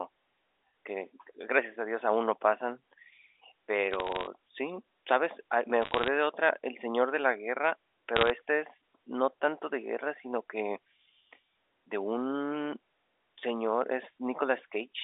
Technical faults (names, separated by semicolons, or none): bit errors on a digital phone line